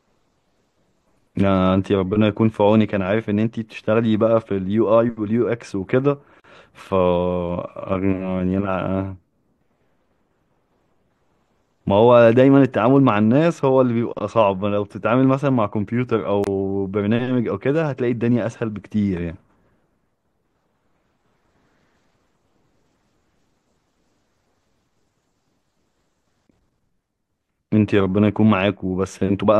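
At 6.40 s, 16.44 s and 26.47 s the speech drops out briefly, about 42 ms, then 27 ms twice, every 10 s: gaps at joins of encoded pieces, where each separately encoded chunk kept its encoder delay and end padding, leaving short holes with smeared edges before the speech resumes exactly where it stopped.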